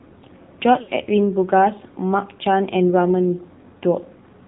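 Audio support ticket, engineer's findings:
AMR narrowband mobile codec, whole clip: speech band-limited with nothing above 4 kHz, buzzy and synthetic, plainly audible codec damage. The coarse excitation pulses suggest a low mode, which fits AMR-NB at 7.4 kbps. A simple telephone low-pass would stay smooth. Here the buzz comes from the vocal-tract model itself.

Lost AMR speech frames, 0.82 to 0.91 s: the voice is drawn out, then fades toward silence, and returns weak or rough. The roughly 60 ms of held sound suggests about three lost frames, with the decoder repeating its last pitch and filter settings at falling gain. A packet-loss gap would drop to hard silence or click instead of smearing and fading.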